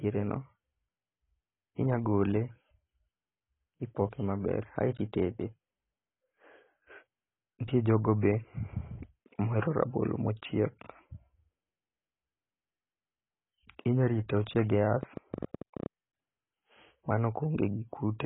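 The whole clip has the dull, smeared sound of AAC compression, likely AAC-LC at a low bitrate around 16 kbps. Nothing survives above 3.8 kHz, and the heavy quantisation leaves the speech with a watery, warbling texture and fizzy sibilants.

From 15.03 to 15.87 s there's a train of clicks, around ten sharp ticks at an uneven pace of about 13 per second, peaking roughly 10 dB above the speech. They most likely come from electrical interference or a faulty connection injecting pulses.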